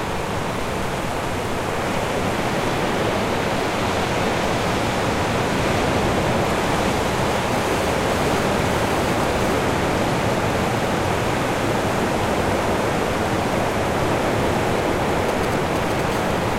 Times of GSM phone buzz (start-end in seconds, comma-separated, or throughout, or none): 16.12-16.54